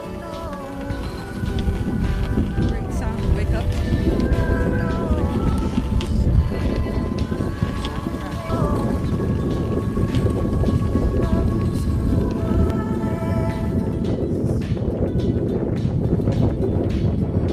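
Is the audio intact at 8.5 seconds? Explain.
No, there's a skip ahead at about 8.49 to 8.51 s. Roughly a second of audio got dropped while later audio was already queued, so playback lurches forward with no gap at all, and the two sides butt straight together.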